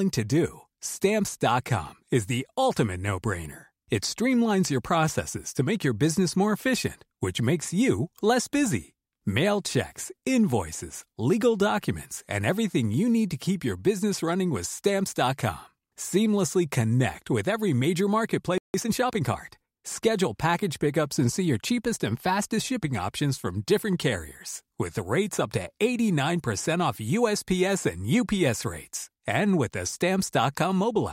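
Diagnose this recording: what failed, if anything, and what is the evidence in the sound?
At 18.58 s the speech cuts out mid-flow and the output is silent for about 0.16 s, resuming at 18.74 s. This is a playback stall, likely a player that briefly ran out of buffered data or had its output thread blocked, so nothing reached the converter until it recovered. On the waveform this is a flat, silent gap with abrupt edges on both sides. On a spectrogram it appears as a vertical band of empty space across all frequencies.

From 18.74 s to 19.38 s the speech runs hurried, at about 1.25 times normal speed with its pitch unchanged. This is time-compressed catch-up at the playback stage. The player is shortening the backlog left by the stall by dropping small slices of audio and cross-fading across the joins. On a spectrogram the harmonics keep their spacing while syllables sit closer together. 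On the waveform the envelopes look compressed in time.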